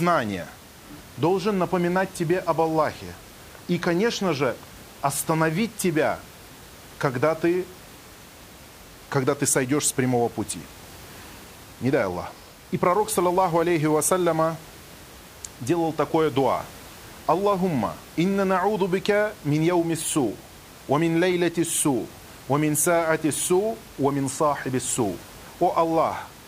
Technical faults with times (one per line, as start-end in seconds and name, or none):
none